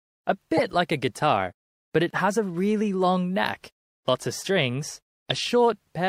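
Speech with three bursts from corrupt frames being decoded. The first runs from 0.55 to 0.73 s, the second from 2.10 to 2.20 s, and a brief blip lands at 5.30 s. Each one is a short burst of energy at the wrong frequencies. The first two are fairly loud, and the last is quieter. Flipped bits made the decoder misread gains and codes, so energy landed at the wrong frequencies. The lengths suggest several damaged frames, then a few, then a couple.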